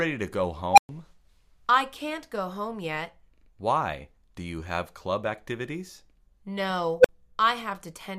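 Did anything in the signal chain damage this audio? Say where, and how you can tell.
Yes: an unstable filter in the processing stage. At 0.72 s and 6.99 s, tones near 700 Hz and 500 Hz swell within about 50 ms, clip, then cut to silence as the recursion overflows.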